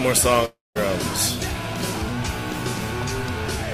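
At 0.45 s the sound suddenly turns into a buzzy, fading continuation of whatever was just playing, then drops to silence for about 190 ms before audio returns at 0.77 s. That pattern points to a likely long network dropout: nothing arrived for roughly 0.3 s, so the receiver stretched the last sound to cover the gap, gave up, and picked up later on. The 300 ms that never arrived is simply missing.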